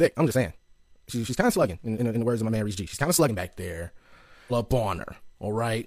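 A time-stretched section runs from 0.0 to 3.4 s. The speech moves at twice its normal pace while its pitch stays put, most likely because software compressed this stretch to fit a length by dropping short pieces, so it sounds rushed.

A stream segment skipped shows up at 4.47 to 4.52 s. The audio suddenly jumps ahead with a small blip, the likely result of one piece of a segmented stream failing to load and the player carrying on with the next one.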